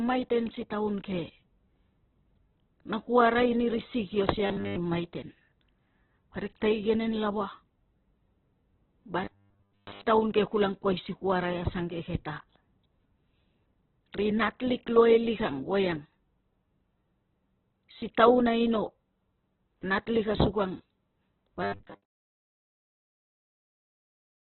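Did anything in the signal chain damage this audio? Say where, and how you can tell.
Yes. The codec stage is the likely culprit for damage across the whole clip. It sounds like heavy Opus compression. Nothing survives above about 4.1 kHz, so the speech is narrowband and muffled. Tones come out rough and grainy. That fits a very low bitrate near 8 kbps.

The driver or buffer stage likely adds robotic sound from repeated short buffers at 4.46 to 4.76 s, 9.24 to 10.05 s, and 21.63 to 22.85 s, ending just before "ni siang nei". A rigid 100 Hz metallic buzz follows the original speech only roughly. That fits a 10 ms buffer being replayed. Most of the real audio is likely skipped there. The last burst overlaps a smooth fade-out from about 21.5 to 22.07 s.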